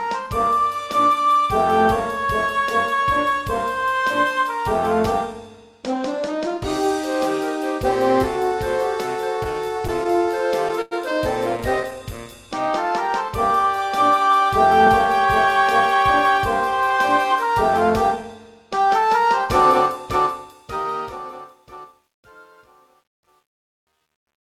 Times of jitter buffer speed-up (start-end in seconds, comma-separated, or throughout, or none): 15.94-18.24